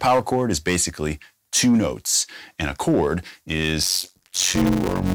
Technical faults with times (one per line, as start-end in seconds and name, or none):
0.00-5.14 hard clipping
3.82-5.14 block size mismatch (padded)